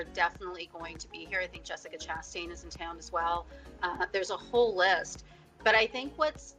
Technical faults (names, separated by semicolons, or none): none